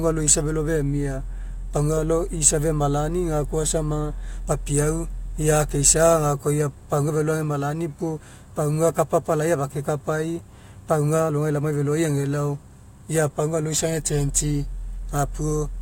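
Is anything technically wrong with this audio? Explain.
No, nothing technically wrong.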